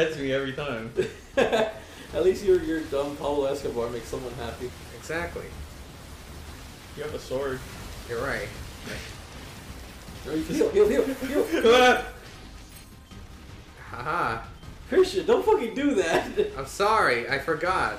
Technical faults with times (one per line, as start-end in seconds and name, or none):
1.04-17.67 word clock ticks